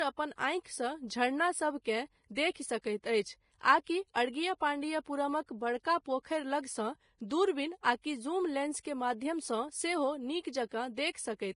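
From start to finish the speech carries heavy coding damage that points to a likely cause in Vorbis compression at a low bitrate, consistent with roughly 30 kbps. Nothing is present above about 10.6 kHz, so the top octave is simply gone. Below that limit the treble has been quantised so coarsely that fine detail is replaced by noise of similar energy, giving sibilants and upper harmonics a hissy, grainy texture, roughened tonal quality and softened, smeared onsets.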